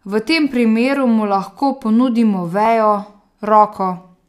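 From 0.51 s to 3.73 s, a click cuts into the speech about every 1.07 s, roughly four times in all. Each one is a tiny jump, as if a handful of samples, on the order of fifteen, went missing or were doubled. The steady spacing points to clock drift buffer slips. The likely cause is two devices on separate clocks, off by a few hundred parts per million. The buffer between them drifts until it must skip or repeat a block.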